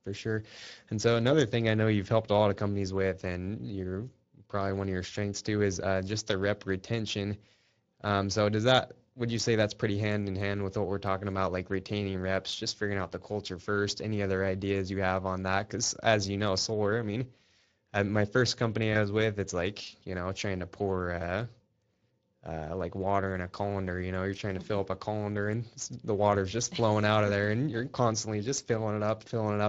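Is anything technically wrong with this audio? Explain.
Yes. Two faults are audible.

Throughout the clip, Speex codec coding damage is plainly audible. This CELP coder models the speech with too few bits for the excitation signal, so the voice takes on a noisy, hoarse texture. The degree of damage fits a bitrate of around 20 kbps.

At about 18.93 to 18.97 s, between "uh my first company" and "was with it's like", there is VoIP packet loss concealed by the speech codec. It points to a single lost 20 ms frame. The decoder repeats its last pitch and filter at reduced gain, producing a brief, fading smear before normal speech recovers.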